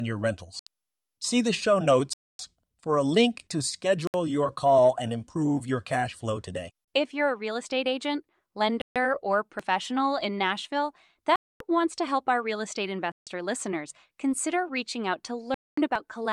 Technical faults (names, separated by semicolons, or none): Bluetooth stall; audio missing between chunks